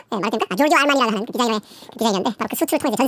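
Wrong sample rate runs throughout the clip, from the first moment to the last. The speech plays at exactly twice its natural speed and sits a full octave, 12 semitones, above where it belongs, which fits audio captured at 16 kHz being played back at 32 kHz with no rate conversion. Because the samples are simply read out twice as fast, timing and pitch shift together, leaving voices sounding squeaky, chipmunk-like and rushed.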